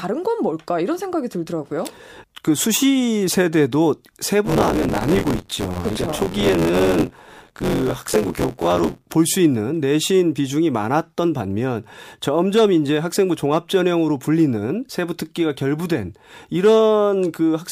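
From 4.45 to 9.06 s there's buffer tearing. The writer and the playback side of the ring buffer have slipped out of step and cross partway through every period. Roughly a third of each chunk ends up being stale audio from about 20 ms earlier, spliced in with hard edges. You hear it as a robotic rattle at 86.1 Hz riding on the speech, which fits a 512-sample buffer.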